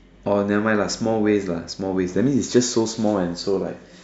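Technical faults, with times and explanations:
No technical faults can be heard anywhere in this speech clip. Nothing in it calls for a time or an explanation.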